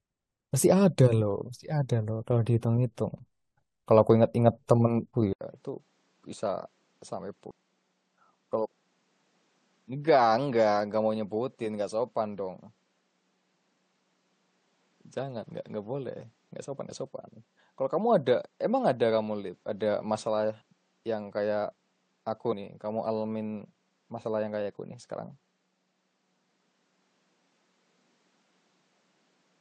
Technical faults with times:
5.11-5.14 damaged data in a compressed stream
5.33-29.61 input switched to a poorer device
7.50 damaged data in a compressed stream
12.36-12.39 damaged data in a compressed stream
16.88 damaged data in a compressed stream
22.51 damaged data in a compressed stream

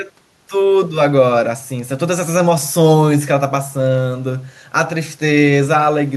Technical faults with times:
none

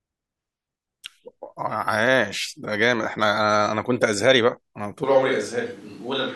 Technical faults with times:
5.04-6.36 switch to a distant microphone

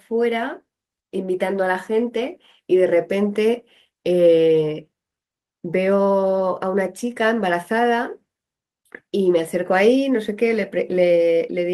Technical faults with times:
none

